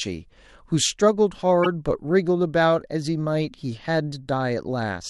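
At 1.63 to 1.66 s the speech is broken by damaged data in a compressed stream: for about 33 ms the decoder was fed corrupted frames, misread them and had to hunt for the next valid frame header before resuming. It comes through as a short chirp, squawk, click or hole cutting into the speech. On a spectrogram it shows as a narrow vertical band that breaks the surrounding harmonics. The waveform shows an abrupt discontinuity at each edge.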